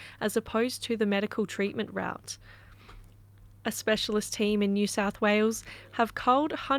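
No dropouts, clicks, distortion or other technical faults can be heard anywhere in the clip.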